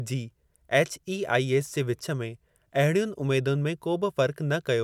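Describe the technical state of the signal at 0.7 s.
At 0.7 s the speech signal is intact, with no audible fault at that moment.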